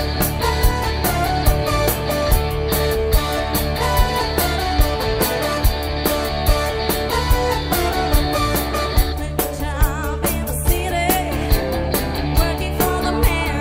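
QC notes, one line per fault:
No faults heard anywhere in the audio; nothing to log.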